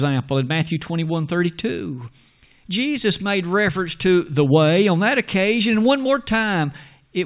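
Listening through the speech, nothing stood out as a technical problem at any point.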